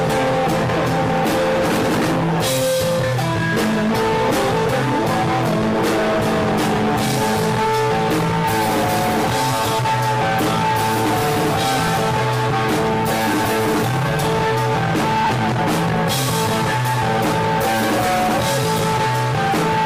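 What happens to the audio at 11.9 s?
At 11.87 s there's a lost LE Audio frame, a gap of about 7.5 ms, which fits a single dropped frame. The LC3 decoder fills it by reusing the previous spectrum with randomised signs, so you hear a brief, noisy smear.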